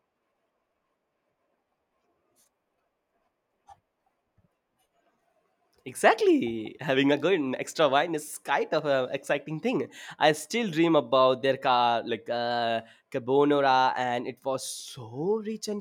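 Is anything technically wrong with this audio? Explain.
No, nothing technically wrong stood out on listening to this speech recording.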